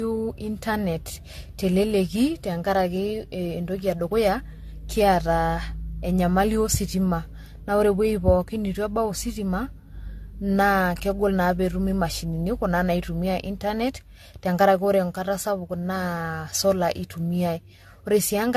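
From start to finish the speech has a swirly, hollow, smeared quality, with consonant onsets blurred, and nothing is audible above 14 kHz. The likely cause is generation loss: the audio seems to have been through an AAC-LC encoder around five times, at a rate that points to 64 kbit/s, each pass requantising on a shifted frame grid so the noise and spectral holes accumulate beyond what one encode would leave.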